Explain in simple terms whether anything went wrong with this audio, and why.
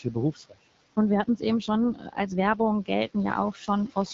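Several things went wrong.

The first is noise suppressor artifacts, present throughout. A noise suppressor estimates the steady background hiss in the room and turns it down, moment by moment. Here it pushes that room noise down hard, so the background drops away in the gaps and comes back up underneath the speech.

The second is the AMR wideband (HD Voice) codec, also present the whole way through. This is the compression used for HD phone calls. It rebuilds speech from a simplified model of the voice and fills in the very top of the sound with shaped noise. Nothing above about 7.4 kHz survives. The damage is plainly audible: the speech sounds rough and raspy, which fits one of the codec's lower data rates rather than its clearer settings.

The third is speech cut by the noise suppressor, heard twice. From 0.33 to 0.58 s the suppressor mistakes part of the speech for background noise and turns it down sharply, so a short stretch sounds swallowed. 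A milder version happens from 3.53 to 3.69 s, where a bit of speech goes faint rather than vanishing. The room noise beneath all this is simply part of the recording space.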